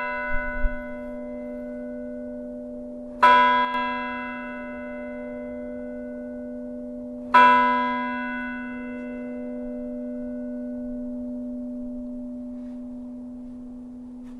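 At 3.65 s one side of the stereo path likely goes silent for a moment, a brief one channel drops out that lasts until 3.74 s, just under a tenth of a second. With only one channel feeding the mono sum, everything the two sides shared drops by about 6 dB at once, and anything carried only by the missing side vanishes. The result is a short, abrupt dip in level that snaps back just as suddenly.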